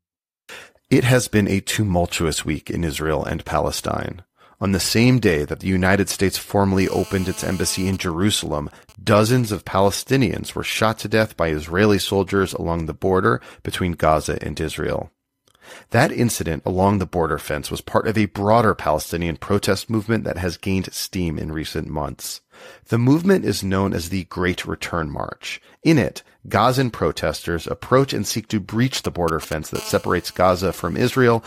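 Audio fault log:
6.78–7.90 s: GSM phone buzz. A hard, raspy buzz at 217 Hz sits about 19 dB below the speech. It is rich in harmonics and ignores the speech. A nearby 2G phone in a call is pulsing its transmitter 217 times a second. The audio circuit rectifies each radio pulse into sound.
7.93–10.75 s: GSM signalling bursts. The steady buzz breaks into even ticks with a longer 217 Hz buzz twice a second, around 25 dB below the speech. The phone is still in the call, but its user has gone silent. It now sends only sparse groups of bursts. The circuit rectifies each group into a tick or a brief buzz.
28.96–29.77 s: GSM signalling bursts. A galloping dit-dit-dit of short 217 Hz buzzes appears. It is much louder this time, only around 10 dB below the speech. Here the phone is signalling before a connection, sending short burst groups that the circuit rectifies.
29.78–31.27 s: GSM phone buzz. 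The pattern turns into a continuous raspy 217 Hz buzz, about 23 dB below the speech, with many harmonics. The phone has gone into a call and sends its bursts 217 times a second without a break. The circuit rectifies every burst into a steady tone.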